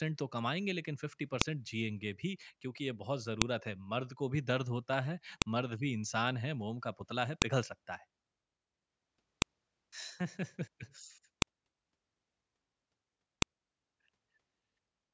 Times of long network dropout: none

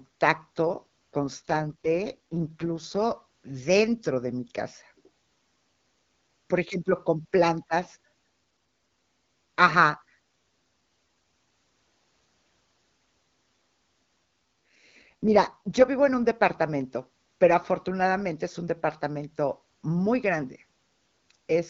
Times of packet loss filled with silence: none

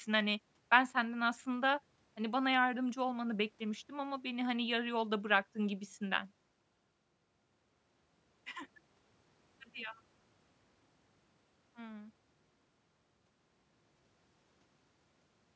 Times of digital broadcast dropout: none

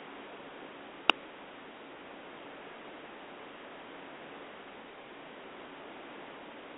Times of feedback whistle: none

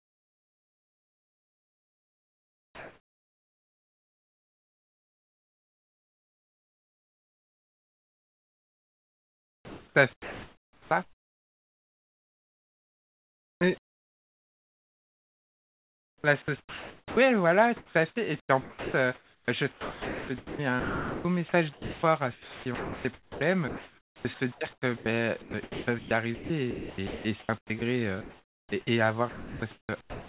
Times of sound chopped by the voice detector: 0.00-17.17, 17.77-28.72, 29.29-30.28

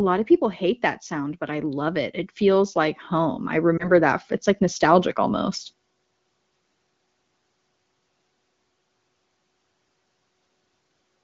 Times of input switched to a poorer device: none

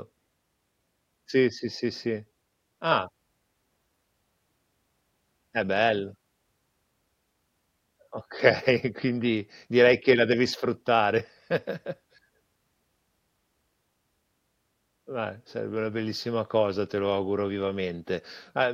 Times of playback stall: none

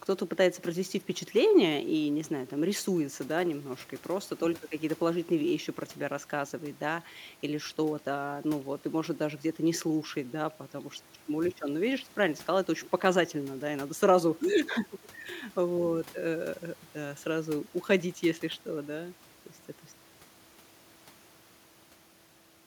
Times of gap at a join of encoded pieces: none

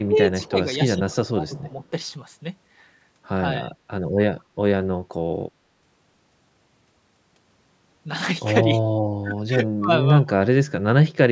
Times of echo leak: 0.42-0.49

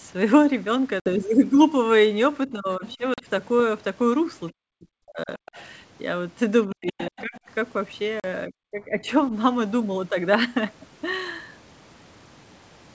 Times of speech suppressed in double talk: 2.47-2.98, 4.54-5.30, 6.67-7.35, 8.47-9.08

